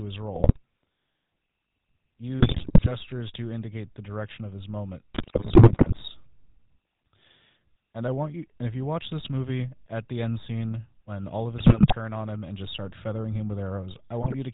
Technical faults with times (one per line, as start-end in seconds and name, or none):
0.00-14.53 GSM full-rate codec
0.34-0.58 GSM bit errors
2.40-2.89 GSM bit errors
5.14-6.03 GSM bit errors
11.58-11.94 GSM bit errors
14.22-14.35 GSM bit errors